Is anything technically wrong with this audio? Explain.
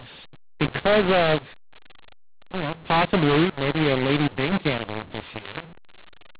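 Yes. Throughout the speech, mu-law and A-law are mixed up. A-law telephone samples are decoded as mu-law, scrambling levels. The speech is harsh and distorted, and pauses fill with noise. The telephone band itself stops near 4 kHz, which fits G.711 coding.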